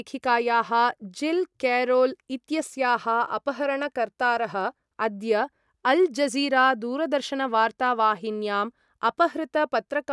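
No dropouts, clicks, distortion or timing errors are audible anywhere in the recording.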